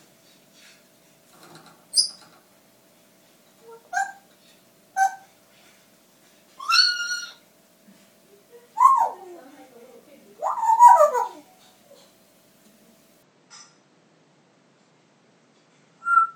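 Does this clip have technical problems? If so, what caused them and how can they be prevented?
Yes. From 13.23 s to the end at 16.35 s, the sound abruptly loses everything above 8.4 kHz, drops a few decibels in level, and picks up a different faint background noise well beneath it, with no gap at the join. This is likely an input switched to a poorer device. The simultaneous change in bandwidth, level and noise floor distinguishes it from a codec or filter narrowing the band, which alters only the top end. Locking the input device in the recording software prevents this.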